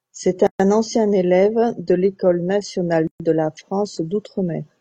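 At 0.47 s the speech drops into a gap at a join of encoded pieces, lasting about 128 ms. It recurs at 3.07 s for about 126 ms. Separately encoded pieces were joined untrimmed, leaving encoder delay and padding as silences with smeared edges. Speech resumes where it stopped.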